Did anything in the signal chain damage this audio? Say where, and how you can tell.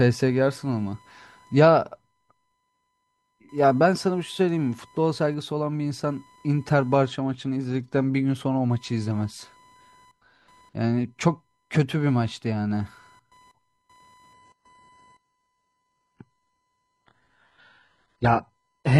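Yes. Computer activity noise enters through the analogue ground: a buzzy chirp pulsing near 1 kHz, roughly 35 dB below the speech, runs throughout and follows machine load, not the speech.

At 14.34 s the adaptive stream switches to a lower bitrate until the end. The change is sudden, with no gap, unlike a dropout. Nothing remains above 15 kHz, consistent with an HE-AAC rendition.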